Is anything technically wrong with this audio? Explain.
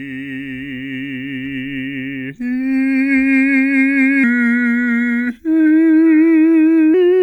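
Yes. From 4.24 to 6.94 s, a section at the wrong speed plays at 0.883 times normal, likely from a clock mismatch. The music drops about two semitones and drags.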